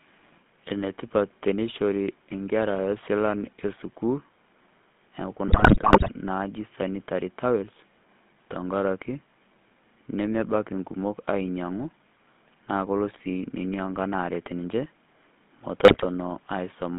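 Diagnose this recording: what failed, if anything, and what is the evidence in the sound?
The codec stage is the culprit: the whole clip has the buzzy, gravelly grain of the GSM full-rate codec, which fits the old 13 kbps full-rate mode. The speech sits in a 150 Hz to 3.7 kHz band, and the damage is plainly audible because the excitation is rebuilt from sparse, regularly spaced pulses.

On top of that, GSM bit errors hit the network stage twice, from 5.48 to 6.09 s and from 15.84 to 16.07 s, as squawks, pops and gargling. Corrupted filter, pitch and gain parameters bend the spectrum and level frame by frame, consistent with a few percent of bits flipped.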